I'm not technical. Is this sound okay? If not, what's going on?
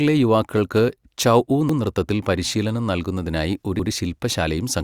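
No. Overlapping chunks cause a brief stutter at 1.69 to 1.79 s, just before "നൃത്തത്തിൽ പരിശീലനം നൽകുന്നതിനായി ഒരു", and again at 3.79 to 3.89 s, right after it. The speech was handled in 2-second pieces that overlapped, so a tenth of a second plays twice at each join.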